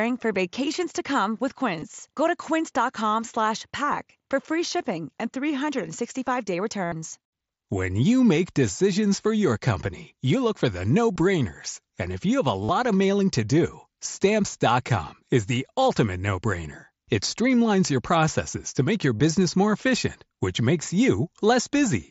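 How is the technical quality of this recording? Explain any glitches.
The speech has five short dropouts filled with a buzzy, held tone that warbles as the real sound resumes. These are concealed Bluetooth headset packet losses. The headset link dropped audio, and the receiver filled each gap by repeating the closest-matching piece of the preceding waveform. The dropouts come at 1.80–1.82 s after "vacations to come with", 6.84–6.92 s (75 ms, the most audible), 11.15 s after "you look for the", 12.64–12.69 s before "of mailing to do", and 19.16–19.20 s. The band-limited, slightly grainy sound of the mSBC headset link is audible throughout.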